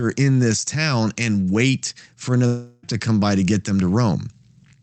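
Right after "town and wait for", from 2.46 to 2.84 s, the sound smears into a fading buzz until "to come by to", likely a long network dropout concealed over the gap.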